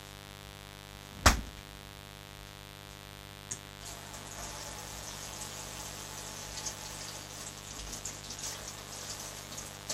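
A raspy mains buzz sits under the sounds throughout, only about 10 dB down. Its 50 Hz switching spikes carry harmonics into the kilohertz range, unlike a smooth, low hum.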